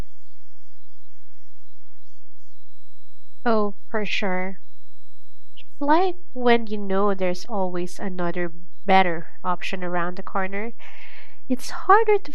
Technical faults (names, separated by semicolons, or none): DC offset